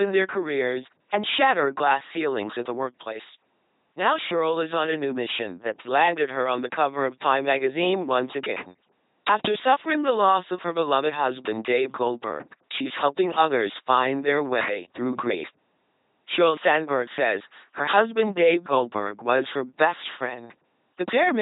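From start to finish the speech passes through an LPC-10 vocoder. Each frame is rebuilt from a ten-pole filter excited by either a pulse train or noise, so the voice comes out buzzing and robotic, with harsh buzz or hiss where voicing is misjudged. The damage is heavy, consistent with a 2.4 kbit/s rate. A spectrogram shows rigid, evenly spaced harmonics, smeared formants, and nothing above 3.9 kHz.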